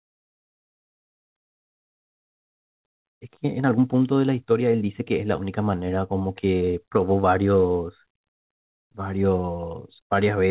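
From 0.62 to 5.49 s, a jitter buffer speed-up trims short pitch-period pieces, cutting about half a second. The speech runs 11% faster, same pitch, sounding hurried.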